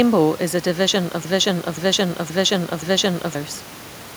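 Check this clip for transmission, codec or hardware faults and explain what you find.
One transmission fault is present. Broken-record loop, 1.25 to 3.35 s, just after "is a division of": a 0.52 s fragment repeats exactly four times, back to back, likely because the stream stalled and kept resending its last held piece, so the speech meant for that stretch is lost. The room noise sits about 22 dB below the speech.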